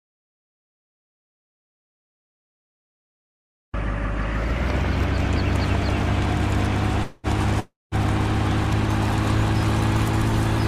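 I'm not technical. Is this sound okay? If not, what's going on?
No. Two call audio freezes occur, at 7.03 to 7.27 s and 7.60 to 7.95 s. The sound stalls into a fading buzz, the second going silent, then resumes. Delayed network data is the likely cause.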